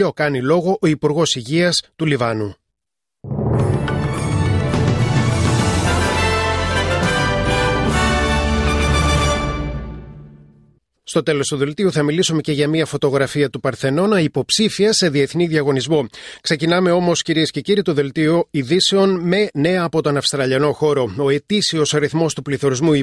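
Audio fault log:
Nothing faulty can be heard anywhere in the clip.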